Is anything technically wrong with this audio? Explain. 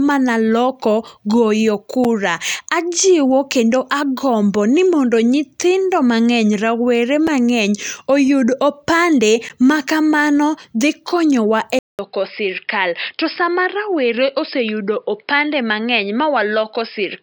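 Yes. Three brief blocks of digital silence occur at 2.04 s, at 7.27 s after "nyithindo mang'eny rawere", and at 9.49 s after "oyud opande". The output buffer likely went unfilled and dropped to zero with hard edges, so each is a tick rather than a fade. The 5.3 ms gaps fit a 256-sample buffer; the last lasts 13 ms.

From 11.79 s to the end, the input likely switched to a poorer device. After a 200 ms silence, the sound turns dull, cut off above 5.2 kHz and slightly quieter, with a new, faint noise floor. That lasting change in tone sets it apart from a momentary dropout.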